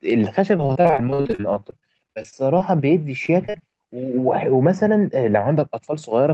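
From 0.57 to 2.62 s the speech turns choppy and robotic, with pieces missing. This is repeated packet loss: a string of dropouts up to 50 ms long, about a quarter of that span patched by stretching earlier sound. Overlapping it, from 2.04 to 3.06 s, delivery drags and sounds get drawn out, running at 93% speed. This is a jitter buffer slow-down: the receiver repeated small slices of audio to add 80 ms of reserve. The same robotic choppiness returns from 3.26 to 3.62 s as repeated packet loss, with gaps up to 38 ms and about 27% concealed. Throughout, the top end stops near 8 kHz, as expected from the Opus call path.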